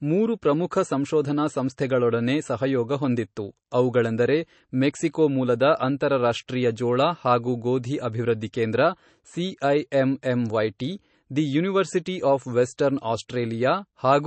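MP3 compression throughout: the speech is watery and swirly with nothing above 8.3 kHz, likely from low-bitrate MP3 encoding, which fits about 32 kbps. Pre-echo at 8.53 s after "ಜೋಳ ಹಾಗೂ ಗೋಧಿ ಅಭಿವೃದ್ಧಿ", at 12.77 s after "ದಿ ಯೂನಿವರ್ಸಿಟಿ ಆಫ್", and at 13.28 s: block-wide quantisation noise leaks 10 to 14 ms ahead of sharp attacks as brief hiss.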